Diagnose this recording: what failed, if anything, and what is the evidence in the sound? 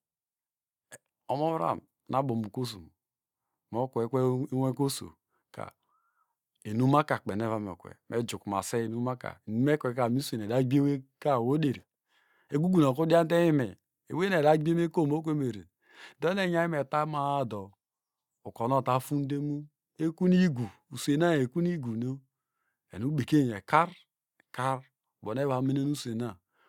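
Nothing failed: the recording carries no audible evidence of a fault at any stage.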